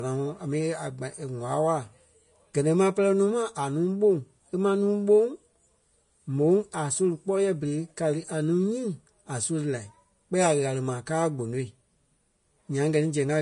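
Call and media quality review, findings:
Vorbis compression, whole clip: hissy, grainy treble and roughened speech tones, nothing above 10.5 kHz. Likely a low-bitrate Vorbis encode, fitting roughly 33 kbps. Coarse residue quantisation turns fine detail into noise, unlike a plain low-pass filter, which would sound clean.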